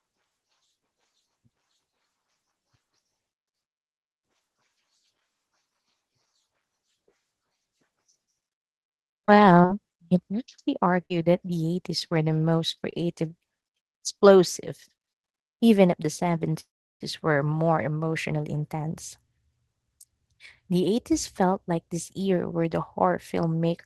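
Between 8.83 and 12.94 s, scattered short gaps from about fifteen lost or late packets are patched by extending the preceding speech, leaving brief ticks and smears, the longest around 40 ms.

From 16.60 to 17.02 s, just after "even if the", a call audio freeze, likely from delayed packets draining the jitter buffer, holds the sound briefly and then leaves about 350 ms of silence. The speech resumes intact at "were more emotionally intense", 0.4 s late.

Between 19.65 and 20.83 s, a jitter buffer speed-up trims roughly 150 ms of excess buffered audio, a few pitch periods at a time. The speech runs at 110% speed, hurried but at unchanged pitch.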